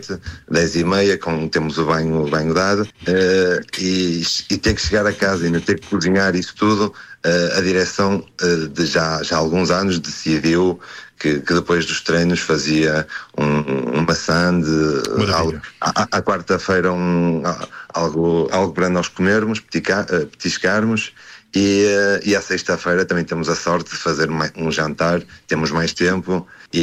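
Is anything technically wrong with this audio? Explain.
No, there are no technical faults.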